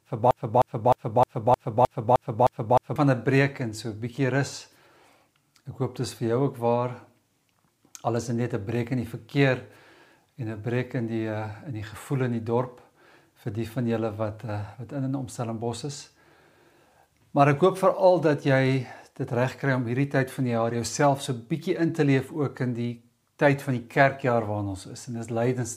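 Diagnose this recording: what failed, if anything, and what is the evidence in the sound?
From the first instant to 2.96 s the audio is stuck in a broken-record loop: a fragment of about 0.31 s repeats exactly, back to back, and is already cycling when the clip begins, recurring nine times in all. The likely cause is a stall at the playback or streaming stage, where the player kept re-sending the last buffered fragment, so whatever should have sounded in those seconds is lost. A waveform shows identical blocks repeating every 0.31 s; a spectrogram shows the same pattern tiled in vertical stripes.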